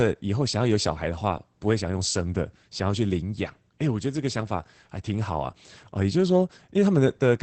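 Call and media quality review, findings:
Opus voice compression, throughout. Speech muffled, slightly hoarse and robotic; codec damage plainly audible. Spectrum empty above 8.5 kHz, consistent with the wideband limit of the SILK linear-prediction coder. Sound points to a low bitrate, around 12 kbps, where the excitation is coded coarsely, giving the rough, buzzy texture. Component: encoder at the sending end, voice mode.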